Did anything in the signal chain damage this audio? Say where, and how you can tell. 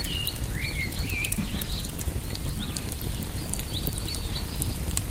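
Yes. At the codec stage, a call bitrate drop between 0.87 and 2.15 s makes the audio rough and muffled, consistent with falling from 48 kbps to 17 kbps.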